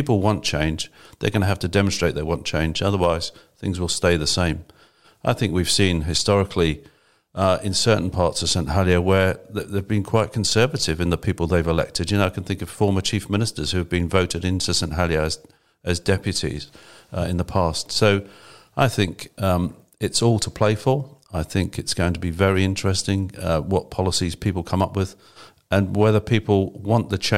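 No faults can be heard in this speech clip.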